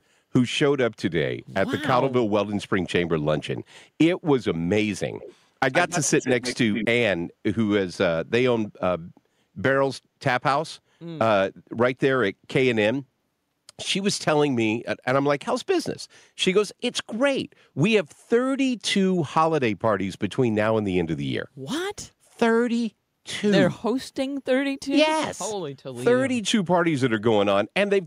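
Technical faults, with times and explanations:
5.2–5.35 s, 5.72–6.56 s and 6.73–6.87 s, echo leak: the far end's echo canceller was likely failing to cancel its loudspeaker's sound from its microphone, so a residue was sent back. A copy of the speech trails the original by 128 ms. It is faint in the first brief scrap, about 20 dB down, then nearly as loud as the speech itself, about 5 dB down, in the longer stretch and the final short burst.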